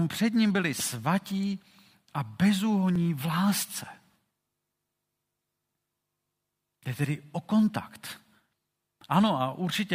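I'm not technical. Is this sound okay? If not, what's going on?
No. Periodic USB or driver dropouts run from 0.91 s to 9.09 s, starting right after "před ním byli". Every 1.02 s, something on the computer briefly stalls the audio connection. About a millisecond of speech is skipped, heard as a regular tick.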